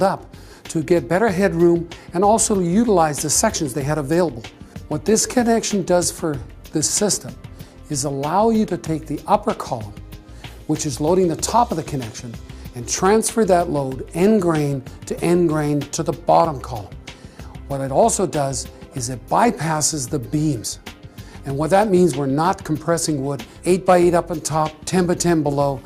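No technical faults are audible.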